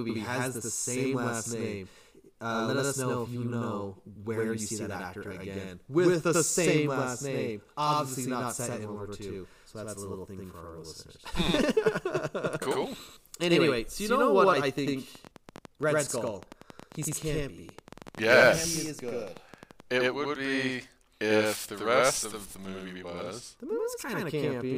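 It's a speech recording with a channel delay (doubling) running the whole way through. One channel lands about 93 ms behind the other, which fits a 4096-sample buffer, and once they're folded to mono you hear every syllable twice, like a slap echo at equal level. Then, right after "so you know", a train of clicks kicks in from 14.41 to 19.72 s: around thirty same-shaped pops at an uneven pace of roughly 5.3 per second, sitting about 10 dB above the speech and audible in the gaps too. That's likely interference from nearby gear or a faulty connection or power supply.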